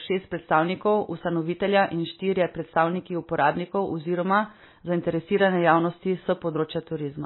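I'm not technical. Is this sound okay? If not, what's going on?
No. The speech sounds heavily squashed from start to finish, and the likely cause is strong MP3 compression. The encoder had very little data to work with, so it threw away everything above 4 kHz, which makes the voice dull and muffled, like a cheap phone line. It also dropped quieter detail unevenly from moment to moment, giving a watery, swirling quality, with s sounds turning smeared and metallic.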